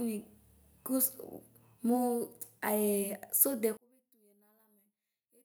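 From 3.77 s to the end, the speech drops by about 34 dB and turns faint. This points to one channel inverted: the likely cause is one stereo channel carrying reversed polarity, so the centred voice cancels when the pair is summed to mono and only the small difference between the channels survives. On a waveform the envelope collapses abruptly at 3.77 s. A spectrogram shows the harmonics fading to a faint residue.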